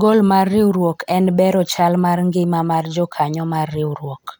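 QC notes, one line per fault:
Nothing stood out on listening to the speech.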